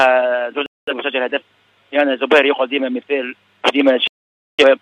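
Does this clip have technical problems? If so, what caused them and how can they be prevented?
Yes. Digital broadcast dropouts occur at 0.66 to 0.93 s and again at 4.08 to 4.64 s. The receiver stopped getting decodable frames, either from lost signal or failed checksums, and muted until clean frames returned. The sound drops out and resumes further along, with roughly 213 ms and 512 ms of programme simply gone, which fits runs of about five and twelve lost frames. Stronger reception, through better antenna placement, a higher-gain antenna or a more robust transmission mode, prevents these dropouts.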